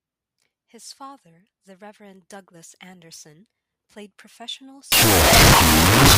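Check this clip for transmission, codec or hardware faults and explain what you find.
One fault is present. Wrong sample width runs from 4.92 s to the end of the clip. Data written as 16-bit integers is being read as unsigned 8-bit, so each original sample is split into two bytes that are treated as separate values. The high bytes keep a coarse trace of the speech, while the low bytes become loud, hissy noise. Doubling the sample count plays that section at half speed, an octave lower and buried in noise.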